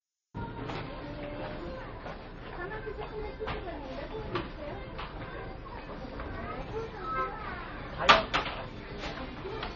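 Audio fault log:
Throughout, MP3 compression: a hard cut above 7.2 kHz with watery, swirling dropouts, likely a starved encode near 32 kbps. The swirl separates it from simple low-pass filtering.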